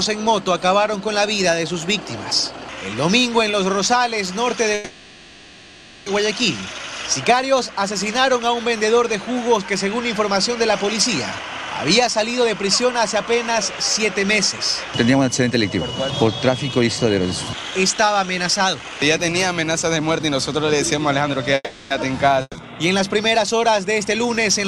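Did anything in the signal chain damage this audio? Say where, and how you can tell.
Yes. The damage sits in the network and the receiver's jitter buffer.

A call audio freeze occurs twice: from 4.74 to 6.07 s, about 1.3 s of continued, fading sound, and from 21.55 to 21.92 s, about 0.36 s including a brief 20 ms silence. Packets were likely held up in transit, so the buffer ran dry and the receiver stretched the last sound. When the packets arrived, the audio carried on exactly where it had stopped. Nothing is skipped, which separates this from packet loss.

Jitter buffer speed-up runs from 11.39 to 21.38 s at about 110% speed, trimming roughly a second overall. It occurs again from 24.04 to 24.65 s at about 112%, removing around 70 ms. The pitch stays put while the pace hurries. That marks the receiver cutting out pitch-period-sized slices to shed excess delay, rather than a resampling error, which would shift pitch along with speed.

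A burst of packet loss hits at 22.42 to 22.57 s. About 130 ms is filled with a decaying continuation of the preceding sound, with roughly 30 ms dropping to silence. When playback resumes it has jumped forward by that same 130 ms. Unlike the freezes, the audio in between is gone, so the timeline skips rather than simply pausing.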